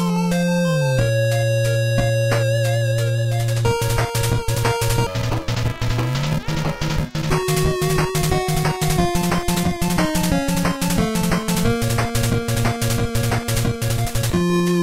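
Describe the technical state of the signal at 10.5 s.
At 10.5 s the signal is intact, with no dropout, distortion, glitch or other technical fault to be heard at that moment.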